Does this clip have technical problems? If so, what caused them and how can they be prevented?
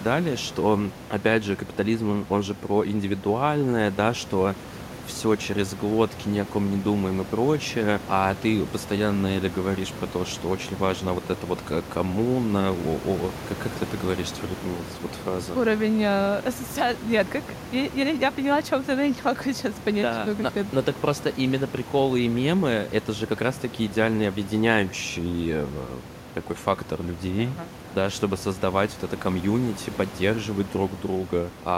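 No, there are no faults.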